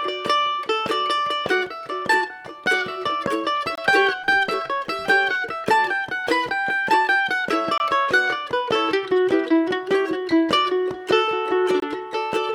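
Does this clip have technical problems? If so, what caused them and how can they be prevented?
Yes, there's a gap between chunks: clean, hard-edged dropouts of about 23 ms at 3.75, 7.78 and 11.8 s, spaced 4 s apart. The audio was split into 4-second pieces, and a sliver of silence ended up at each join. Nothing is missing, but the flow breaks there. To prevent it, join chunks sample-accurately, with gapless playback and any encoder padding trimmed.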